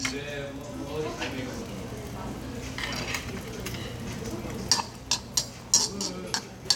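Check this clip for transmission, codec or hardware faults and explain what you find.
No transmission, codec or hardware faults turn up in this clip.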